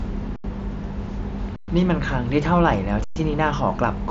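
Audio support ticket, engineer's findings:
Underrun with held sample at 0.36 to 0.44 s, 1.56 to 1.68 s and 3.04 to 3.16 s (80, 120, 120 ms). Output buffer starved, converter holding its last value: speech freezes flat without a click, then resumes where it stopped. Path carries mSBC headset audio, speech band-limited to 8 kHz.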